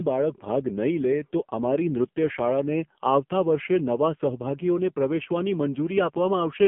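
Throughout, the speech has been squeezed through the AMR narrowband mobile codec, which rebuilds the voice from a vocal-tract model and a few pulses per frame. Nothing above 3.4 kHz or below about 150 Hz survives, and the heavy buzzy, synthetic coarseness fits a rate near 5.9 kbps.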